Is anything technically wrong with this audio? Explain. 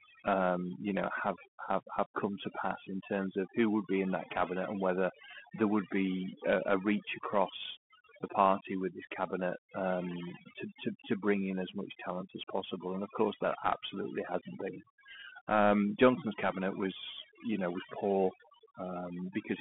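Yes. Two faults run through the whole clip.

Overdone noise removal is present from start to finish. A noise reducer set too strong pulls individual frequency bands down whenever they sit near its noise estimate. Quiet parts of the speech vanish with them. The background drops and breaks up into twinkling specks.

The speech also passes through the Bluetooth CVSD headset codec throughout. The sound fits 64 kbps CVSD, which codes one bit per sample as a step up or down. The audible band runs from about 150 Hz to 3.4 kHz, with nothing above 3.7 kHz. The damage is plainly audible. Loud bright sounds outrun the step size and distort. S sounds turn scratchy, over a granular hiss.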